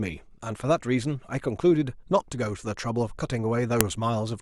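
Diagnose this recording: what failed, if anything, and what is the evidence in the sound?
A single sharp, loud click lands at 3.81 s, cutting through the speech regardless of what the voice is doing. This is a file header played as audio: separately stored WAV pieces were joined without stripping the header, so its bytes were decoded as samples.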